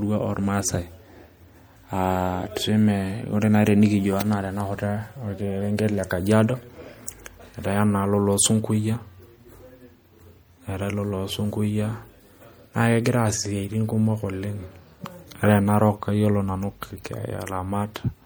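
Throughout the speech there is plainly audible MP3 compression damage. Weak detail flickers in and out between frames, giving a watery, swirly texture on sibilants. The heavy loss points to a low bitrate, likely around 64 kbps.

At 17.04 s there is a pre-echo. The codec spread its coding noise across a whole block, so hiss meant for a sharp attack leaks about 12 ms ahead of it. That attack sounds softened and smeared.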